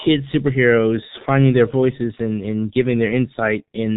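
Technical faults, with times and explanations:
Throughout, G.723.1 codec: the speech is narrowed to a telephone-like band with nothing audible above 4 kHz, so it sounds heavily muffled, and the voice carries a rough, hoarse quality. The codec encodes each 30 ms frame with a compact model of the vocal tract that changes only slowly, so rapid consonant detail smears and sibilants lose their edge. The damage is heavy, which fits the low bitrate of about 6.3 kbit/s.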